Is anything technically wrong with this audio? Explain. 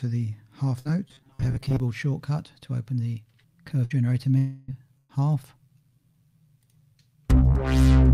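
Yes. The audio has three kinds of network-related fault.

Bursts of packet loss occur at 0.79 to 0.88 s, 3.85 to 3.93 s and 4.98 to 5.12 s. Packets arrived too late or not at all. The receiver covered each gap by continuing and fading the last sound, as a held buzz or a fading hiss. The fills last 55 ms, 52 ms and 111 ms. When the audio resumes, 60 ms, 60 ms and 120 ms of material are missing.

From 1.08 to 1.80 s there is robotic sound from repeated short buffers. The sound turns rigid and metallic, with a fixed buzz at 133 Hz. This likely comes from audio arriving too seldom, so each short buffer was played again to fill the time. That rate fits a repeated segment of about 7.5 ms. Roughly half of this stretch is repetition, and the real audio in between is skipped.

A long network dropout runs from 4.38 to 4.71 s. For about 298 ms the last sound is stretched and faded. It never falls to full silence. 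The cause is likely a long break in delivery. When the audio returns, about 300 ms of material is gone.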